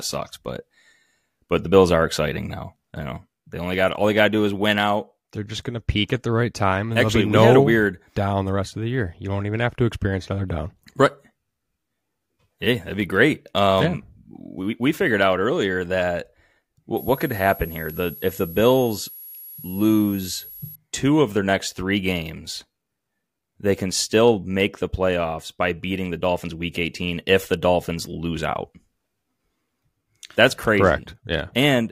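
A switching power supply in the recording chain drops into an audible burst mode or beats against another supply, putting a switching supply whistle on the speech from 16.97 s to 20.76 s, ending just before "two of their next". The supply's switching frequency falls into the audible band and leaks into the audio, heard as a thin, high whistle drifting between about 11.3 and 11.65 kHz as the load shifts, sitting roughly 20 dB below the speech.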